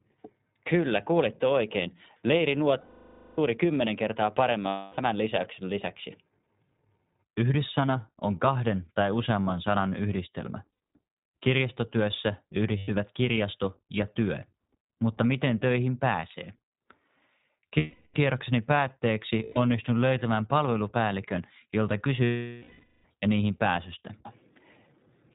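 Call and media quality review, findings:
iLBC codec, whole clip: narrowband coding, consistent with 20 ms frames at roughly 15 kbps. Nothing above 4 kHz, speech plainly rough and synthetic-sounding.

Lost iLBC frames at 2.80–3.39, 4.68–5.00 (between "kymmenen kertaa" and "lisäyksen lisäksi"), 10.72–10.80, 12.78–12.91 (before "kirjasto ja työ"), 17.78–18.16, 19.44–19.58 (before "löytämään palvelupäällikön jolta") and 22.24–23.06 s. Decoder concealment repeats the last pitch cycle with noise, so each gap is a held, buzzy vowel, fading on the longer 0.58 and 0.8 s losses. Speech recovers immediately after each gap.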